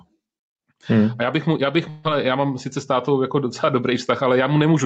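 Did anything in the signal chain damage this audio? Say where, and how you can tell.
Yes. Throughout the speech the gain swings by around 5 dB, so levels sound squashed. This is gain pumping, likely from microphone gain set too high and a fast limiter or compressor clamping each peak.

At 1.89 to 2.07 s, after "bych mu já bych", a long network dropout likely removes about 160 ms of audio. The receiver's concealment fills roughly 152 ms with a fading buzz or hiss continuing the last sound, then speech resumes at "já mám sice s" with that part lost.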